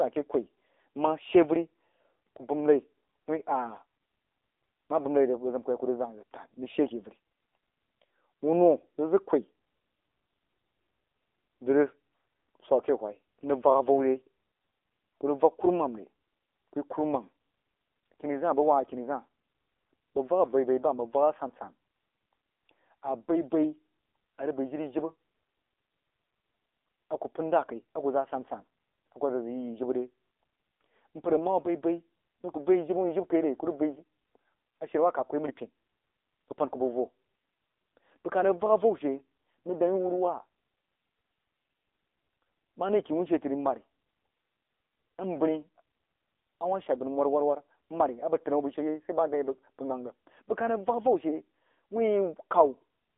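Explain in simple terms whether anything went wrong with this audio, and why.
The whole recording, from start to finish, has been through an AMR narrowband mobile codec, the kind used for phone calls on older mobile networks. It keeps only a thin slice of sound, roughly 300 Hz to 3.6 kHz, and nothing above about 3.7 kHz gets through. So the speech sounds muffled and boxy. The compression is heavy, which is likely why the voice also sounds buzzy and artificial.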